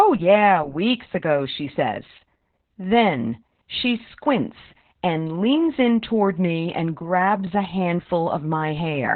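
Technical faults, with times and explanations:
Throughout: heavy Opus voice compression; narrowband SILK coding removes everything above 4 kHz and coarsens the excitation, leaving muffled, hoarse, robotic-edged speech that suggests about 8 kbps.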